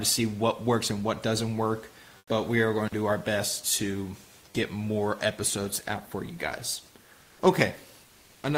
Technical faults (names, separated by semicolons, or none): comfort noise in place of the background; intermittent contact